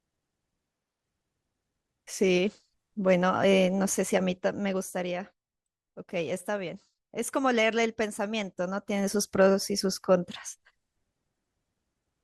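No technical faults can be heard anywhere in the speech.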